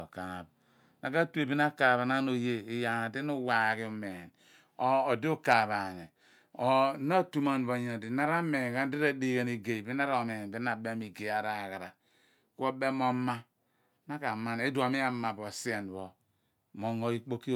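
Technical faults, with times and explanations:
No technical faults, with times and explanations, can be given for this speech clip, as none are heard.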